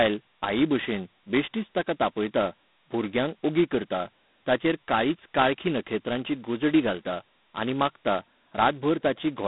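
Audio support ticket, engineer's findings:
G.726 ADPCM damage throughout the speech. Harsh rasping hiss riding on the speech level, consistent with 2-bit difference coding against an adaptive predictor, which fits 16 kbit/s. Spectrogram: band 150 Hz to 3.7 kHz, empty above 3.9 kHz, grainy noise filling formant gaps.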